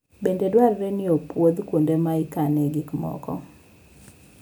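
At 0.59 s, just before "ni opwodh kuonde ma", a brief sharp snap sits over the speech, likely an electrical switching spike from a nearby switch arcing into the line.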